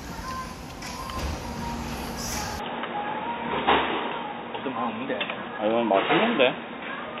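From 2.59 s to the end, the everyday sounds abruptly turn dull and boxy, with nothing above about 3.8 kHz. The change comes without a gap or any noticeable jump in level, and a faint new background noise, roughly 40 dB below the sound, arrives with it. The likely cause is an input switched to a poorer device mid-recording, such as another microphone or a headset's call profile, whose narrower band and own noise floor replace the original.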